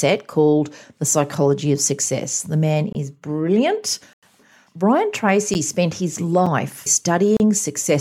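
A block of digital silence first appears at 2.93 to 2.95 s, a 23 ms hole that fits a 1024-sample buffer going unfilled. A longer one at 4.13 to 4.23 s lasts 93 ms, consistent with a 4096-sample block. Brief dropouts follow at 5.54 s (10 ms), just before "spent his", and at 6.46 s (5 ms), just after "spent his". A final 33 ms gap runs from 7.37 to 7.40 s. Each time, the speech cuts to silence with no fade and returns the same way. The shortest gaps sound like ticks, and the longer ones like pops or short holes.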